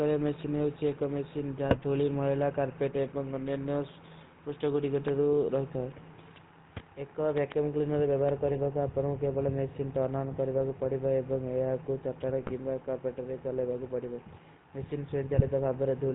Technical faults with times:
0.00-16.14 GSM full-rate codec
1.68-1.85 GSM bit errors
5.08-5.10 loud pop
7.38-7.54 loud pop
8.29-8.31 loud pop
8.48-8.60 GSM bit errors
12.39-12.51 GSM bit errors
15.32-15.43 GSM bit errors

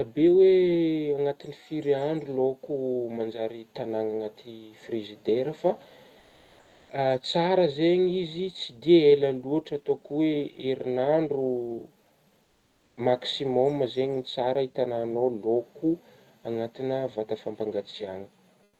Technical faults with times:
6.19-6.89 comfort noise in place of the background
12.43-12.97 comfort noise in place of the background
18.63-18.79 comfort noise in place of the background

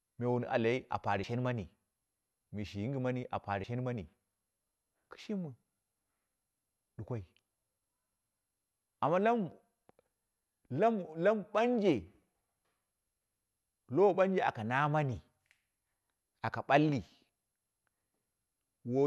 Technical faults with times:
1.23 compressed frames skipped
3.63 compressed frames skipped

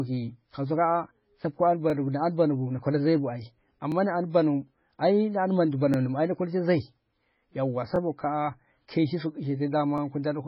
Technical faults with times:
0.00-10.47 MP3 compression
1.90-1.92 overlapping chunks
3.92-3.94 overlapping chunks
5.94 overlapping chunks
7.96-7.98 overlapping chunks
9.98 overlapping chunks

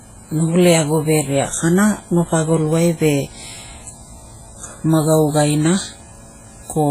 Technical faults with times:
0.00-6.91 WMA compression

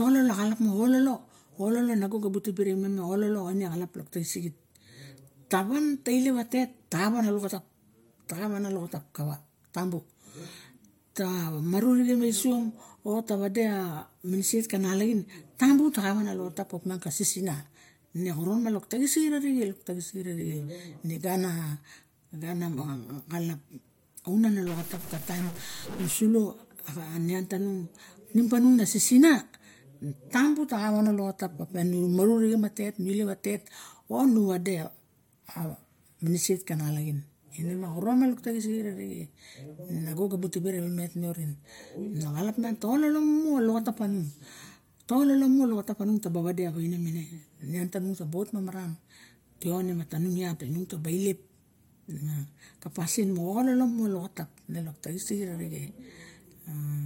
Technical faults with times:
24.67-26.13 stuck bit

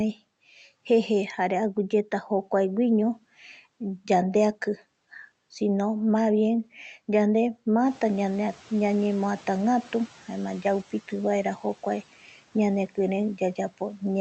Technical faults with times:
7.86-10.18 noise suppressor catching up

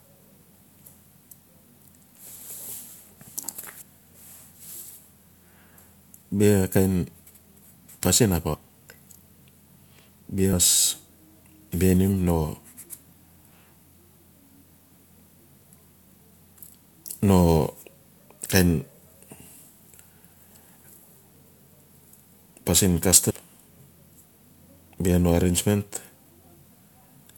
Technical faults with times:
3.68 overlapping chunks
3.80 compressed frames skipped
8.53-8.55 compressed frames skipped
10.52 compressed frames skipped
10.71 overlapping chunks
14.72 overlapping chunks
16.66 compressed frames skipped
23.29 compressed frames skipped

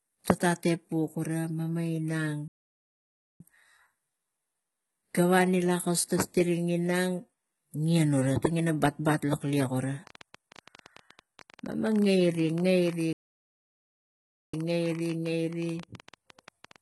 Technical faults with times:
0.00-16.81 HE-AAC compression
2.48-3.40 playback stall
10.07-16.81 train of clicks
13.13-14.54 playback stall

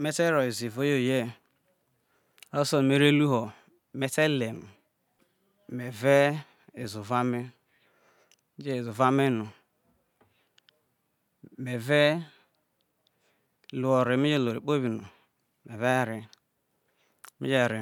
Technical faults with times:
none

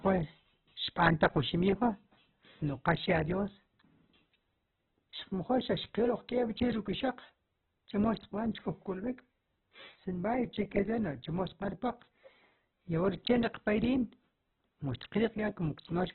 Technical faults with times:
0.00-16.14 Opus compression

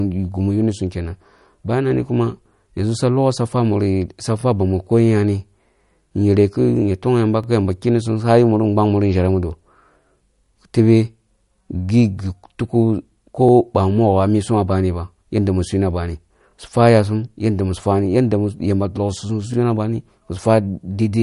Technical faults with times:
0.00-21.22 MP3 compression
1.39-1.41 overlapping chunks
4.41-4.44 overlapping chunks
7.44-7.46 overlapping chunks
10.46-10.49 overlapping chunks
13.49-13.51 overlapping chunks
16.51-16.54 overlapping chunks
19.54-19.56 overlapping chunks

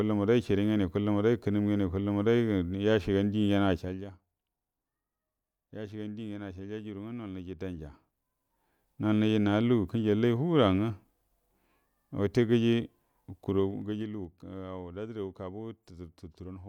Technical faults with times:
3.71-4.06 zipper noise
13.44-14.32 zipper noise

